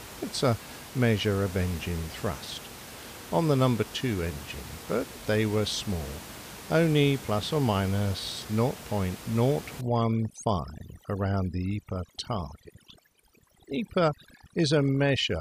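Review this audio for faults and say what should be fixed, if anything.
From 9.81 s to the end of the clip at about 15.4 s, the speech shows overdone noise removal. The noise reducer is acting far too aggressively on the room noise, which sits only about 16 dB below the speech. Any frequency band close to its noise estimate is pulled down hard or gated off entirely. The low-level parts of the speech are removed along with the noise, leaving near-silent gaps with twinkling specks. Prevent it by lowering the reduction depth and setting the threshold just above the measured noise floor, or by cutting the room noise at the source before recording.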